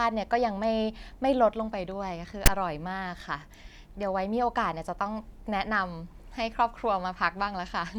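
At 2.46 s there's a short, hard-edged burst of static cutting into the speech: file tags played as audio. A block of text metadata got read as if it were samples, so you get a loud, lopsided rasp sitting off to one side rather than clean noise.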